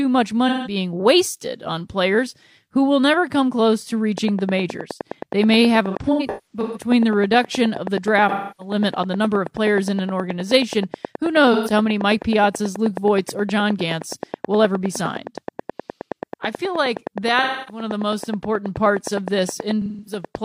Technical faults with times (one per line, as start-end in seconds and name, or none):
0.48-0.76 AAC frame loss with concealment
4.18-20.36 train of clicks
5.90-6.90 AAC frame loss with concealment
8.29-8.74 AAC frame loss with concealment
11.53-11.72 AAC frame loss with concealment
17.42-17.82 AAC frame loss with concealment
19.82-20.25 AAC frame loss with concealment